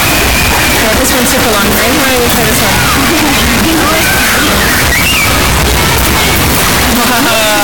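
From start to finish, the audio is a near-square waveform sitting at an almost fixed, high level, very loud and harsh, with background noise raised to the same level as the main sound while its pitch contour stays traceable. This is consistent with float read as integer, likely 32-bit floating-point samples interpreted as 32-bit integers, so each sample's sign and exponent bits, rather than its true amplitude, determine the output level.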